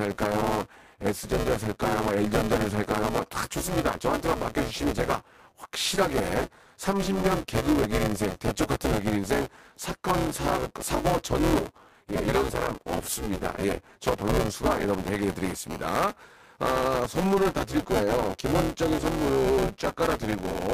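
Buffer tearing runs through the whole speech clip: a steady robotic buzz at 200 Hz that sits on the voice and drops away in the gaps between phrases. The writing side and the playback side of the ring buffer have slipped, so they cross inside every 5 ms period. Roughly a third of each period repeats audio from about 10 ms earlier, with a hard join at each end. Those two discontinuities per period produce the buzz.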